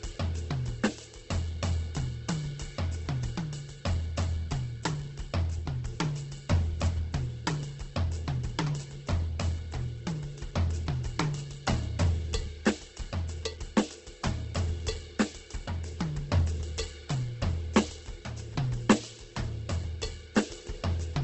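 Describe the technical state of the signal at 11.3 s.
At 11.3 s the music, like the whole clip, sounds rough and grainy, with nothing above 8.2 kHz. It is likely Opus compression at a very low bitrate, where starved bands are filled with folded or noisy content rather than left empty, so it swirls less than MP3.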